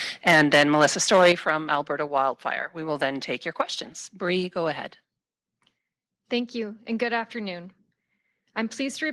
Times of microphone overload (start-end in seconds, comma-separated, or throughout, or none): 0.27-0.86, 1.12-1.50